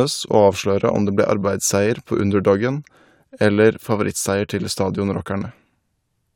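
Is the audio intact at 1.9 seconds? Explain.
Yes, the speech at 1.9 seconds plays through cleanly, with no dropout, click, distortion or other technical fault at that moment.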